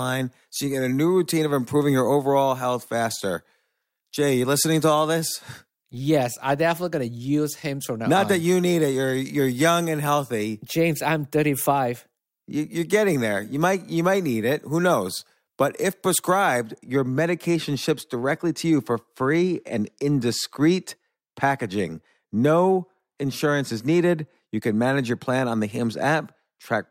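From the start of the clip to about 16.65 s, the speech sounds thin, bright and hissy, with sharp sibilants and little body, until the tone settles just before "your medication ships directly". This is pre-emphasis left on: the treble was lifted before recording or transmission along the standard FM 50 µs curve, and the matching de-emphasis cut was never applied, leaving 10 kHz about 11 dB stronger relative to 1 kHz.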